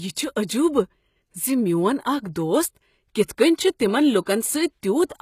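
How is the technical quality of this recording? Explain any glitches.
The quality is fairly rough, with compression damage throughout and a few smeared attacks.

The whole clip has gritty, metallic treble and nothing above 14.9 kHz. That's likely HE-AAC compression rebuilding the top end from copied lower bands, at a very low bitrate of about 20 kbps.

There's pre-echo at 0.47 s, from 2.33 to 2.36 s just before "دوست کتھ", and from 4.21 to 4.27 s right after "چھ تمن". Codec noise leaks ahead of each sharp onset, so you hear a brief hiss of 13 to 55 ms and the attack sounds blurred.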